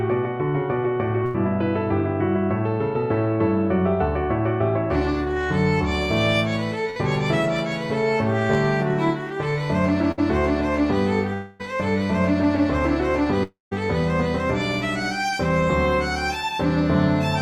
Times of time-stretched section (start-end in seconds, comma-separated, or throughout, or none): none